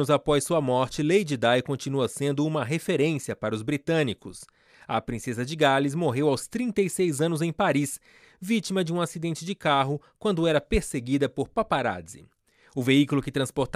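No technical faults are audible.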